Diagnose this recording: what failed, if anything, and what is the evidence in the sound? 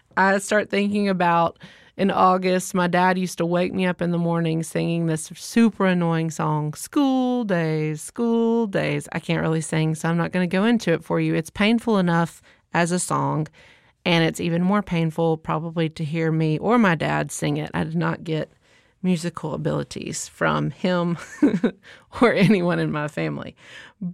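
Nothing failed; no faults heard.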